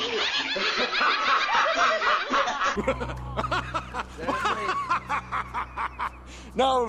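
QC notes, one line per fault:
No faults heard.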